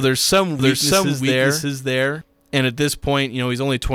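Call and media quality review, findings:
Doubled audio track, 0.59–2.21 s: full-band copy about 0.7 s late, near equal level. Waveform shows repeated envelopes with abrupt edges. Likely a second, slower capture path.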